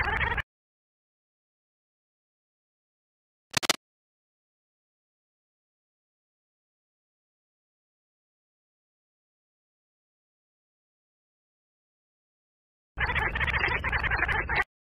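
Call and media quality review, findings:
Cable scratch noise, 3.51 to 3.75 s: dense, uneven scratching burst lasting about 0.24 s, roughly as loud as the programme. Likely a worn cable or connector being moved, contact resistance fluctuating. Waveform: ragged spiky cluster; spectrogram: broadband vertical smear.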